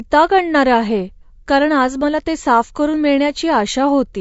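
Speech throughout carries plainly audible low-delay AAC compression: the voice sounds rough and grainy, with noise filling the gaps between harmonics. It is likely AAC-ELD at a bitrate fitting 32 kbps.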